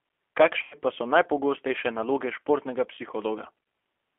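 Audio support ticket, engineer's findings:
G.729 codec, whole clip: band-limited speech, roughly 300 Hz to 3.4 kHz, with plainly audible roughness and a synthetic edge. Points to an 8 kbit/s CELP-type codec rebuilding each 10 ms frame from filter, pitch and sparse pulses.

VoIP packet loss concealed by the speech codec, 0.63–0.75 s and 3.64–3.66 s: speech smeared into a fading extension just before "pa so najpogostejše naloge", then a brief blip. Decoder extrapolating its last pitch and filter. First gap fits four lost 20 ms packets.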